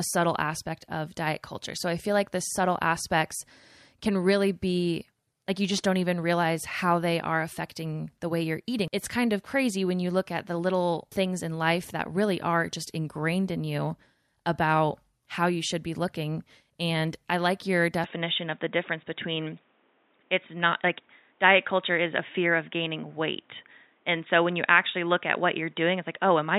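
At 18.04 s the speech abruptly turns duller and boxier, with nothing above 3.8 kHz, a level change of about 5 dB, a faint new noise floor, and no gap. This is likely an input switched to a poorer device, whose narrower band persists to the end.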